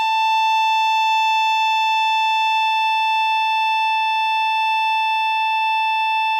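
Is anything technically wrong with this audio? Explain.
No, nothing is technically wrong.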